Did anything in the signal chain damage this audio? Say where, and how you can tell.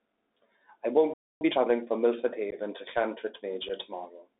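Yes. The Bluetooth CVSD headset codec shapes the speech for the whole clip, at the codec stage. The audio is confined to roughly 250 Hz to 3.7 kHz, and the codec damage is plainly audible: scratchy s sounds, distortion on loud high content, and a granular hiss beneath everything. That texture fits a 64 kbps one-bit delta modulator whose adaptive step size can't keep up with fast, bright waveforms.

A playback stall at 1.14 to 1.41 s cuts the speech off mid-flow for about 0.27 s of silence. This is at the buffer or playback stage, and the abrupt drop to nothing, with no fade and no codec noise, points to a likely underrun or a blocked player thread. The output simply had nothing to play until data arrived again.

Time-compressed catch-up follows immediately, from 1.41 to 1.67 s. The speech runs at about double speed yet keeps its normal pitch. After the stall, the player drained its backlog by dropping small slices and cross-fading the remainder. 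The unchanged pitch shows that this is not simple resampling.

Unconcealed Bluetooth headset packet loss shows up twice on the radio link. At 2.51 to 2.54 s, about 15 ms of speech vanishes, which fits a couple of lost packets. At 3.69 s there is a shorter 7.5 ms hole, about one packet. Each gap has hard edges, and the speech returns briefly quieter, which matches the CVSD step size restarting from its idle state after the missing data.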